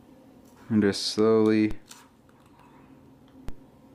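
A low, dull thump lands at 1.71 s and again at 3.49 s, each one a single knock under the sound, which carries on without a break. These are DC steps: the waveform's zero line suddenly jumps by about -23 dBFS, and the 5 Hz high-pass then pulls it back toward centre. The instant jump is what produces the thump, and the slow settling afterwards is too low in frequency to hear.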